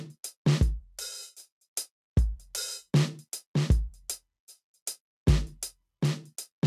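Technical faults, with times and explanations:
Nothing technical goes wrong anywhere in this bit of music, so there's nothing here to point at.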